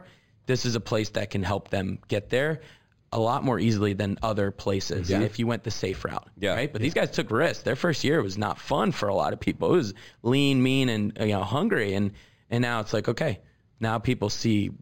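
Throughout the speech, imaging from linear upsampling is audible. The band stops near 5.5 kHz, which fits audio at about 11 kHz raised to 48 kHz by drawing straight lines between samples. That weak filter dulls the top and leaves a mirrored copy of the spectrum from 5.5 to 11 kHz, roughly 25 dB down, heard as a faint metallic shimmer on sibilants. Unlike aliasing, the shimmer mirrors the speech's own spectrum rather than sounding as unrelated tones.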